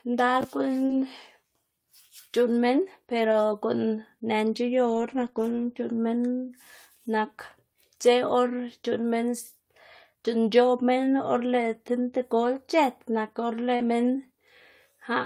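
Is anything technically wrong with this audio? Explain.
Yes, there are a few network-loss artefacts in this speech.

Between 0.85 and 8.07 s you get scattered short gaps: around three little holes where packets went missing or arrived late, the longest roughly 40 ms. The receiver papered over each one by carrying the last bit of sound forward, so it's only a tiny fraction of that stretch. What you hear is a brief tick or hiccup here and there, with the speech staying clear around them.

Right after "c̲h̲ët nak or", at 13.75 to 13.82 s, there's a short concealed packet loss. About 40 ms never reached the decoder in time, so it improvised, extending the pitch of the preceding sound or shaping noise if it was unvoiced, then crossfaded back into the real signal. It comes across as a quick smear or wobble, and a short consonant in there could easily get swallowed.

Overlapping that, from 13.80 to 13.86 s, about 40 ms is a lost packet rebuilt from error correction, which points to a couple of separate packets being dropped. 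The following packets carried low-bitrate backup copies through Opus in-band FEC, and the decoder played those instead, so there's no actual gap. Those rebuilt frames sound rougher and noisier than the speech on either side.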